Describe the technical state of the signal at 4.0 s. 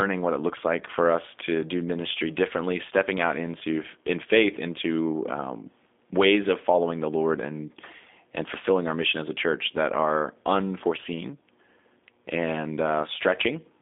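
At 4.0 s, as throughout, the speech carries G.729 codec damage: a line band of 250 Hz to 3.6 kHz with nothing above 3.7 kHz, and a plainly rough, synthetic buzz from pulse-modelled excitation, fitting an 8 kbit/s codec. A simple telephone filter would narrow the band without that texture.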